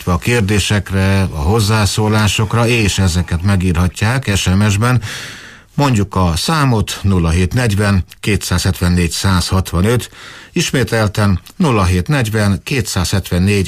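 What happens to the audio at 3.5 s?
Nothing goes wrong at 3.5 s; the audio carries on intact through that moment with no dropout, click or distortion.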